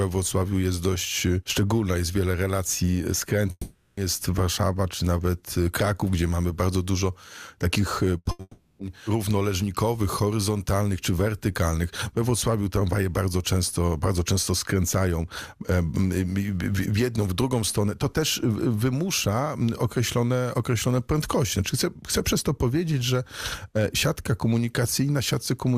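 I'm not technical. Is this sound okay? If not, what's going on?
No, there are gaps where part of the audio is missing.

At 3.51 to 3.99 s, and again at 8.41 to 8.81 s, there is a long network dropout: most likely the connection stalled and roughly 0.4 to 0.5 seconds of audio never arrived. You hear the last sound stretched into a buzz or hiss that fades to a brief silence, then the audio jumps ahead with that stretch gone. What sets these apart is their length and the moment of silence before the sound returns.

Just before the second dropout, at 8.17 to 8.27 s and 8.31 to 8.41 s, there are two bursts of packet loss. Each drops about a tenth of a second, so the last sound is briefly held as a short buzz or hiss, then the audio skips forward. Unlike the dropouts, these blips are too short to fade into silence. Here they come in quick succession and run straight into the longer gap.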